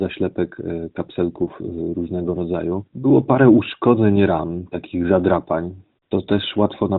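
At 6.04 to 6.10 s, about 60 ms, AMR comfort noise replaces the real background: the phone judged the sound silent, sent no speech frames, and the receiver filled the gap with steady, smooth synthetic noise. Unlike a dropout, the pause isn't dead silence.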